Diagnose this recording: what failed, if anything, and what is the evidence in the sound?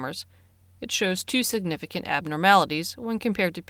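The failure is a call bitrate drop at the codec stage, triggered from the network side. From 1.03 s to 2.17 s the sound turns coarser and less clean. It holds at its worst for about 1.1 s, then recovers. The bandwidth estimate fell, so the encoder was told to spend far fewer bits. The loss of detail fits a fall from around 40 kbps to about 17 kbps. With fewer bits, the codec quantises the signal more roughly until the rate climbs back.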